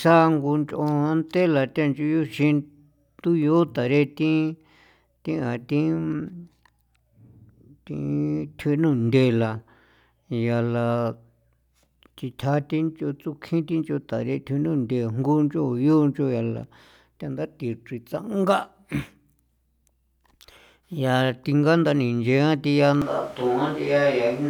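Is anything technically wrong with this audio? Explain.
Yes. At 23.02 s the speech suddenly turns roomy and hollow, and it stays that way to the end. Bass thins out. The level drops by about 5 dB. Room noise sits roughly 25 dB below the speech. The likely cause is a switch to a distant microphone, which picks up more room reflections than the close one.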